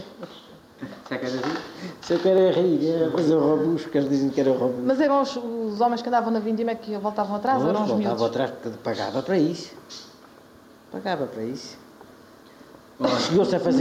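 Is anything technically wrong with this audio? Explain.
Yes. Throughout, the input gain is likely set far too high, so a fast limiter repeatedly pulls the level down, swinging it by about 5 dB.

From 0.67 to 12.57 s, clock drift buffer slips appear as a regular click about every 1.7 s. This is likely caused by two devices whose clocks disagree, forcing a small block of samples to be dropped or repeated at each slip.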